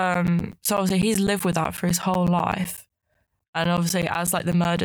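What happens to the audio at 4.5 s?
At 4.5 s the speech is still inside a run of periodic USB or driver dropouts. They last from 0.14 s to 4.78 s and repeat every 0.125 s, eight times a second. Each time, something blocks the USB bus or audio driver and roughly 10 ms of signal is lost and replaced by silence. You hear it as an even train of ticks under the speech.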